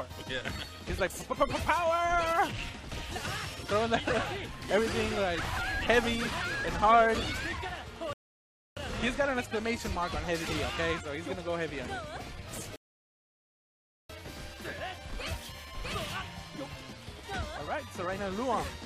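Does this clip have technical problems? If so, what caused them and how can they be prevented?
Yes: rebuffering stalls at 8.13–8.77 s and 12.76–14.10 s. The player starved and paused, leaving flat silent gaps in the waveform before resuming seamlessly. Prevent by buffering further ahead.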